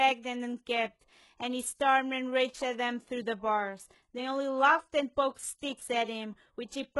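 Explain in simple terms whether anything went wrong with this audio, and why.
Throughout the speech, s sounds are gritty and lispy, with nothing above 11.5 kHz, likely HE-AAC compression, which rebuilds the treble from copied lower frequencies.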